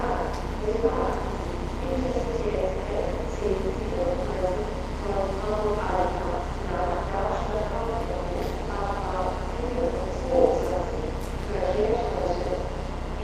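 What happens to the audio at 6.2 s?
The overlap-add ripple that runs through the whole clip is what you hear at 6.2 s, and it's no different there than anywhere else. The sound was chopped into windowed frames and stitched back together with overlaps that don't add up to a steady gain, so the level dips and swells by about 11 dB on every frame, around 200 times a second. That comes across as a metallic buzz with extra tones laid over the sounds.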